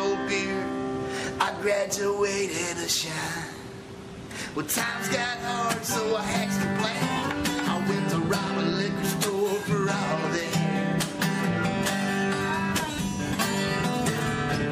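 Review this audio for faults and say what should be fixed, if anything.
Nothing stood out on listening, so there is nothing here that needs fixing.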